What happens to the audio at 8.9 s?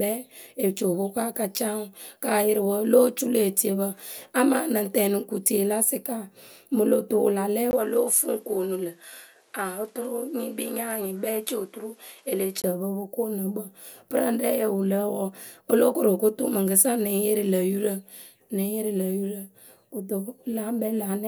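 At 8.9 s the speech sits inside a dull, band-limited stretch from 7.71 to 12.64 s, likely an input switched to a poorer device. Just after "tu wǝ la lɛ" there's a 20 ms gap, then nothing above 13 kHz and a faint new noise floor at the same loudness until "ǝ pǝ".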